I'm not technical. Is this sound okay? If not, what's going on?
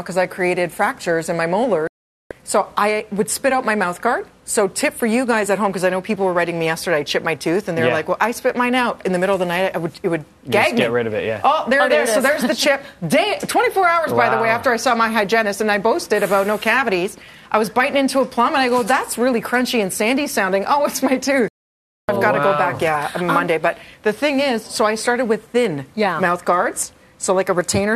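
No. Digital broadcast dropouts at 1.87 s and 21.48 s. The receiver lost the signal or received damaged data, so it went silent until clean data returned, about 0.4 s and 0.6 s later. Whatever played during those gaps is gone.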